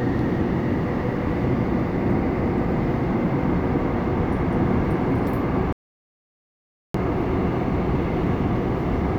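At 5.73 s the sound cuts out abruptly and returns at 6.94 s, an audio dropout to silence lasting about 1.22 s with no room tone, likely from the input being lost while zeros were still written; the waveform goes flat and the spectrogram shows a blank vertical band.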